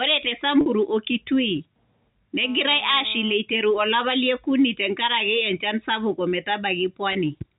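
Packet loss with pitch repetition occurs at 0.61 to 0.66 s (50 ms lost, fitting about five packets) and 7.13 to 7.15 s (20 ms). The last pitch period loops into a held, buzzy tone that shows on the waveform as identical repeating cycles and on a spectrogram as frozen horizontal harmonics.

From 2.43 to 3.33 s, just before "eiteru olapa lie okuni", there is GSM phone buzz. It is a steady, raspy 217 Hz rasp about 20 dB below the speech, drawn as evenly spaced harmonic stripes on the spectrogram, from a nearby phone on a call. The band stops at 4 kHz, as G.711 telephone coding requires.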